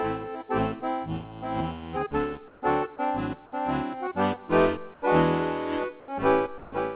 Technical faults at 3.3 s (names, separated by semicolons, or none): none